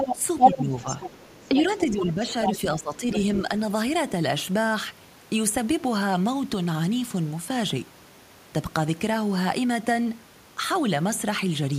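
From 0.0 to 1.92 s, a second voice runs under the speech at about the same level. This is the other side's voice leaking through. The likely cause is loudspeaker sound reaching the microphone that the echo canceller failed to remove.

During that overlap the main speech is pushed down. It dips at 0.12 to 0.2 s, 0.52 to 0.88 s and 1.49 to 3.08 s, by up to about 10 dB. This is speech suppressed in double talk. The echo canceller likely treated both voices as echo and turned them down together. The result sounds like brief drops, then a longer stretch of about a second.

The other voice returns in short scraps at 2.31 to 2.53 s, at about the speech level, and at 3.11 to 3.4 s, about 10 dB quieter.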